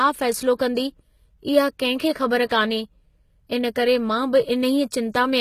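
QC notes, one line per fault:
throughout, HE-AAC compression: likely a low-bitrate HE-AAC stream rebuilding treble by band replication, so sibilants in this speech turn gritty and metallic, with nothing above 14.9 kHz.
2.46–2.51 s, pre-echo: codec noise smeared across a transform block ahead of a sharp attack, leaving about 48 ms of hiss before it and softening the onset.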